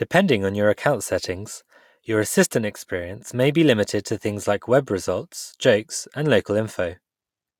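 No technical faults can be heard anywhere in the recording, so there is nothing to describe in time order.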